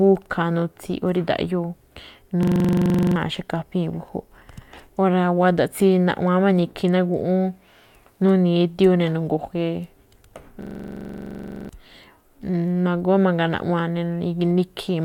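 At 2.43 s and again at 10.62 s the speech stops advancing and a system hang loop takes over, lasting to 3.16 s and 11.69 s. The same 42.67 ms fragment repeats exactly, 17 times and then 25, at 23.4 Hz, which fits a 2048-sample ring buffer cycling while the driver froze. It is a rattling stutter rather than a buzz, and around 0.7 s and then a full second of speech are lost. Unlike a dropout, nothing goes silent. Unlike a CD skip, the loop never moves on.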